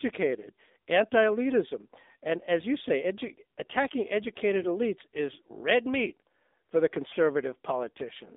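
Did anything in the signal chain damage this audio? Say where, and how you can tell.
Yes. The damage is at the codec stage, and it runs through the whole speech clip. This is the AMR narrowband mobile codec. The band stops at about 250 Hz below and 3.7 kHz above, so nothing reaches the upper range. The voice is buzzy and synthetic, and the coding damage is plainly audible. That fits a low AMR-NB mode such as 7.4 kbps. A few pulses per subframe excite a vocal-tract model, and that model cannot carry the real detail.

There are also AMR bit errors in the network stage. They come as two short bursts, at 4.62 to 4.68 s and at 7.10 to 7.17 s. In each burst the voice keeps its pitch and level but turns hoarse and gargly for a moment. The lengths point to two and three 20 ms frames. Bits were flipped at a rate of several percent. The weakly protected pulse positions and fine parameters decoded wrong, while the frame checksum still passed.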